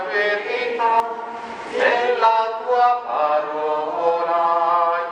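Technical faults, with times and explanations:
1.00 s, damaged data in a compressed stream: a brief glitch cuts across the sound. Corrupted bytes in the encoded stream left the decoder unable to read the frame there, so it lost sync and hunted for the next valid frame header, producing the garbled blip.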